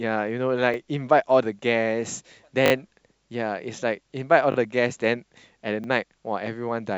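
Playback repeatedly ran short of new audio, and the device replayed its last buffer each time. These repeated buffer faults occur at 0.74–0.76 s, 2.66–2.72 s, 4.52–4.56 s and 5.84–5.86 s. Each repeated slice lasts about 20 ms, which fits a 20 ms buffer. It plays once extra at the first and last points, twice at 4.52 s and three times at 2.66 s. The hard joins give the speech a brief buzzy stutter, with next to nothing lost.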